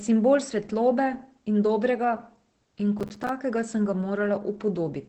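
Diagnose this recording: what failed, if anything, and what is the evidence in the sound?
The codec stage shows Opus voice compression across the whole speech clip. The sound is wideband, cut off at 8 kHz, with the hoarse, slightly robotic texture of SILK's linear-prediction coding. At 12 kbps the excitation is coded coarsely in 20 ms frames, so fine vocal detail is replaced by a buzzy approximation. The damage is plainly audible from start to finish, not confined to any one passage.

The driver or buffer stage fails with processor overload crackle from 2.99 to 3.29 s, ending just before "sem ga". Over those 0.3 s the audio breaks into a rapid burst of hard-edged dropouts. Each one is a short silence where a buffer was not delivered on time. The spacing fits a buffer of about 5 ms, with around fifteen deadlines missed before the load eased.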